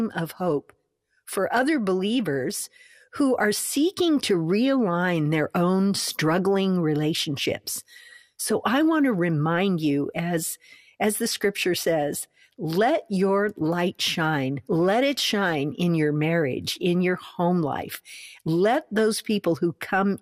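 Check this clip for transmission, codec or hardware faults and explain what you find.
The speech shows codec damage from start to finish, with a sound most consistent with MP2 compression. Throughout the clip the upper range sounds dull and keeps dropping in and out, and what remains has a gurgling, granular roughness. The likely cause is MPEG Layer II coding at a bitrate starved of bits, which fits roughly 80 kbps. The encoder divides the signal into 32 equal sub-bands and, lacking bits, shuts off upper bands and quantises the rest coarsely. Unlike a plain low-pass filter, the cut here flickers rather than staying fixed.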